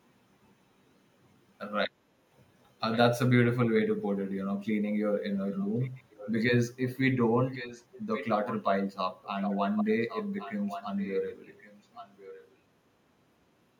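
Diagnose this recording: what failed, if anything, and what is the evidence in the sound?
Call processing failed on one side of the call: its echo canceller likely left part of what its microphone picked up from the loudspeaker, so the speech was sent back as an echo leak. A delayed copy trails the original by about 1.1 s, roughly 10 to 20 dB quieter, at 2.91–2.98, 5.33–6.41, 7.5–8.26, 8.44–8.63, 9.23–9.57, 9.76–9.85 and 10.08–12.52 s. It is strongest around 9.2 to 9.9 s.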